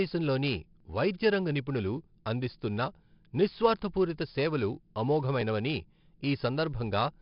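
Throughout the speech, 4-bit ADPCM compression's coarse steps add heavy gritty hiss tracking loud passages; nothing above 5.3 kHz, which points to about 11 kHz sampling.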